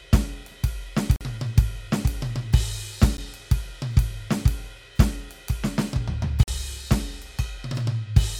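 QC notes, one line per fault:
1.16–1.21 s, block of digital silence: the music drops to digital silence for about 46 ms and returns with no fade. This fits a 2048-sample output buffer left unfilled in time. It is heard as a short audible hole.
3.17 s, block of digital silence: a much shorter dropout of about 12 ms, consistent with a missed 512-sample buffer. The gap is too brief to register as a hole, so the two abrupt edges merge into a single tick.
6.43–6.48 s, block of digital silence: another 46 ms cut to silence, again fitting a 2048-sample buffer that wasn't delivered before playback needed it. The signal stops and restarts instantly, producing a brief gap in the music.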